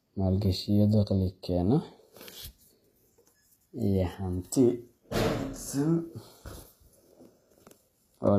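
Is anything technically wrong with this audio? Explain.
Yes. Throughout the speech there is plainly audible HE-AAC compression, likely from a low-bitrate encode that fits about 24 kbps. The treble is rebuilt by copying lower bands upward, so s sounds come out gritty and metallic. A spectrogram shows blocky, repeated-looking upper bands and nothing above 14.9 kHz.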